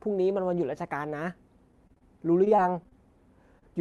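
Packets in this Opus-coded speech call, whose top end stops at about 12 kHz as that codec path does, went missing or arrived too late in two bursts of repeated packet loss. From 1.72 to 2.03 s there were four gaps, the longest 30 ms, and about 28% of the stretch was patched. From 2.45 to 2.93 s there were four more, none longer than 20 ms, with about 13% patched. Each time the receiver stretched the last sound across the hole, only for the next gap to arrive soon after. The result is choppy speech with fragments missing. Later, a single short concealed packet loss between 3.59 and 3.64 s left a hole of a few hundredths of a second that the decoder filled from the preceding sound before blending back into the real signal. That comes through as a brief smear or wobble near the end of the clip.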